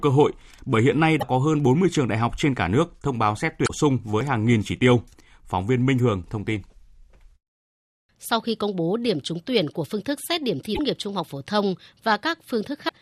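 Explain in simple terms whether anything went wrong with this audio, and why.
Damaged data in a compressed stream causes brief chirps or blips at 1.17–1.23, 3.64–3.70, 5.97–5.99, 10.72–10.79 and 12.85–12.92 s. The stored speech was corrupted in those spots, so the player misread it, lost its place and skipped ahead to where the data made sense again.

At 4.21 s there is a jump where a sliver of sound, only a couple of milliseconds, goes missing. The likely cause is a dropped buffer (overrun): the recording software fell behind, a small piece was overwritten, and the pieces on either side were joined directly.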